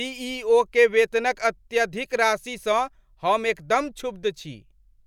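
Nothing technical goes wrong anywhere in this bit of speech, so there's no fault to point to at any moment.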